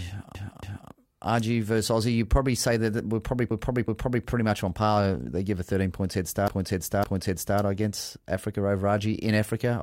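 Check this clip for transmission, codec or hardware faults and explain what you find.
The clip has repeated frames, where a run of compressed frames was decoded three times in a row. A short block plays twice more, producing a stutter. On a spectrogram, the same pattern tiles side by side. The waveform repeats its shape closely.

From 0.35 to 0.91 s, a 279 ms block repeats, adding 0.56 s.

From 3.51 to 4.25 s, between "say that we're probably" and "much on par", a 372 ms block repeats, adding 0.74 s.

From 6.48 to 7.60 s, after "points head", a 557 ms block repeats, adding 1.11 s.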